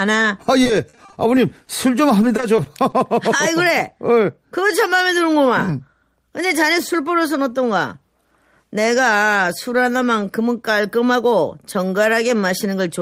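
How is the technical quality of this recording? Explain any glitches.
Repeated packet loss (robotic sound) affects the speech from 0.63 to 2.94 s. Fifteen short gaps occur there, the longest 40 ms. Each is patched by stretching the preceding sound, covering about 13% of that span. The voice turns choppy, with fragments missing.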